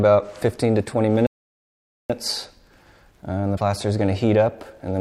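At 1.27 s the audio falls silent for about 0.83 s, until 2.10 s, a playback stall. Its likely cause is the player running out of buffered data or having its thread blocked, so output stopped mid-flow until it recovered and the sound resumed.

From 3.54 to 3.60 s there is damaged data in the compressed stream: some bytes were lost or corrupted, so the decoder misread those frames, lost sync and hunted for the next frame header, leaving a brief disturbance lasting about 60 ms.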